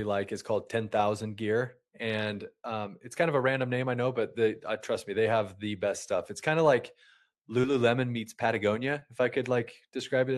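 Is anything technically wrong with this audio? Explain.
Yes, there's short concealed packet loss twice, around 7.61 to 7.65 s and 8.99 to 9.03 s. About 20 ms of the call arrived too late each time. The receiver patched the gap by extending the preceding sound, then crossfaded back, leaving a brief smear or wobble. The call path's top end stops around 12 kHz, which fits an Opus call codec.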